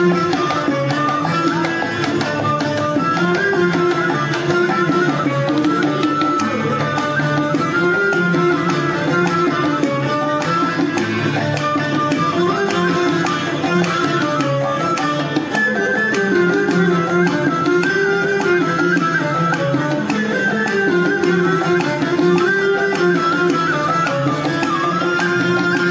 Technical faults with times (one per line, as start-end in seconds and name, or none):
none